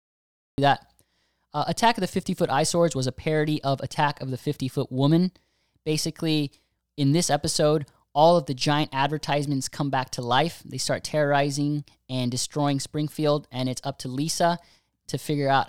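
Speech opens with a cut-off start: digital silence until 0.58 s, then the audio jumps in mid-sound with no attack, showing as a flat line abruptly meeting the waveform.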